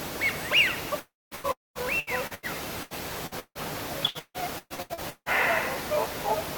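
A likely long network dropout at 0.99 to 1.34 s cuts off incoming audio for about 0.32 s. The last sound is stretched into a fading buzz, then roughly 0.22 s of near-silence follows before audio returns with that stretch gone.

Repeated packet loss (robotic sound) then runs from 1.35 to 5.29 s. Audio keeps arriving late or not at all, each gap patched by extending the previous sound, the longest about 160 ms, with about 31% of the span filled in. The result is choppy audio with pieces missing.

Inside that stretch, a second likely long network dropout from 1.52 to 1.78 s loses about 0.24 s outright. The filler fades, leaving about 0.19 s of silence before the broken sound resumes.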